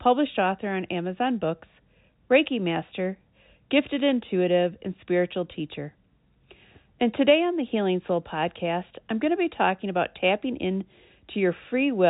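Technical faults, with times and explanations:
Nothing to report: the speech sits on a G.711 A-law telephone path, which confines it to below about 3.8 kHz as that format normally does, and no technical fault occurs anywhere in it.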